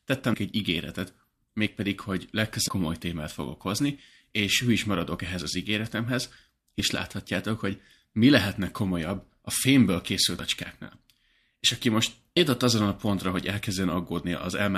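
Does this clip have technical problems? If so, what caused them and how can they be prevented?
Yes. Damaged data in a compressed stream causes four short blips in this speech: at 0.33 s, at 2.67 s between "egy ígéretet mégpedig hogy" and "komoly témát fogok hozni", at 10.38 s after "a fémből készült", and at 12.36 s after "aki most". Corrupted bytes made the decoder misread a frame, lose sync and pick up again at the next valid frame header. Storing and sending the stream with checksums or retransmission, and checking file integrity before playback, would prevent it.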